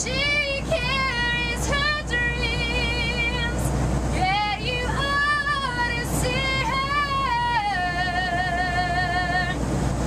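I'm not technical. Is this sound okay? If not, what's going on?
Yes, this sound is okay. I don't hear any technical problems in it.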